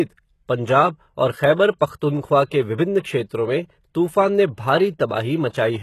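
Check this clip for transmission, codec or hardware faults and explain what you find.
One codec fault runs through the whole clip: the treble of this speech is likely rebuilt by HE-AAC compression. The core codes only the lower spectrum and synthesises the upper bands by copying lower ones, fitting a low bitrate near 16 kbps. Nothing sounds above 12.3 kHz, and the regenerated treble leaves s sounds gritty, metallic or lispy.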